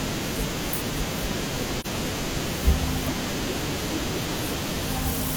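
At 1.80 s there's a brief AAC frame loss with muting, running to about 1.86 s. The decoder zeroed one frame's worth of spectrum, which fits a single lost frame of roughly 43 ms, and the overlapping windows fade the speech out and back in, leaving a brief dip.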